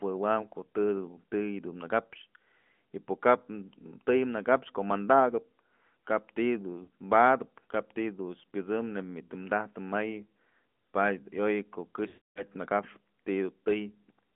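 Throughout, the AMR narrowband mobile codec confines the speech to roughly 200 Hz to 3.5 kHz. The buzzy, synthetic edge points to a mid rate near 10 kbps. Lost AMR speech frames follow. At 6.84 s, a 40 ms gap brings a brief warble. From 12.08 to 12.43 s, reused settings stretch the sound, fade it to silence, then return rough.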